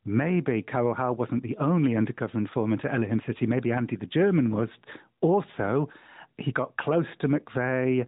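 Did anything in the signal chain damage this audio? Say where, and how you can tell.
No, nothing in the chain has damaged this speech, so there's no fault to trace to any stage.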